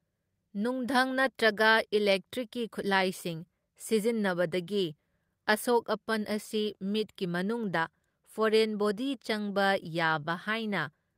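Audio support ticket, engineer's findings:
No faults found in the speech recording. No component flagged and no action required on the audio chain.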